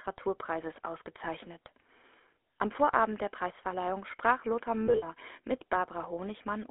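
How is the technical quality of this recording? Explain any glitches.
The quality's pretty rough. It's narrowband phone audio with clear codec damage, plus one short glitch near the end.

The GSM full-rate codec is there for the whole clip. The speech sits in a 300 Hz to 3.5 kHz telephone band and has that buzzy, gravelly texture. That fits a 13 kbps full-rate codec rebuilding the speech from pulse-driven vocal-tract settings.

From 4.86 to 5.05 s you get lost GSM frames. About 100 ms went missing, scattered over 160 ms, with the longest gap around 70 ms. The decoder repeated the last good frame to cover those gaps, so the sound briefly turns into a metallic, ringing smear.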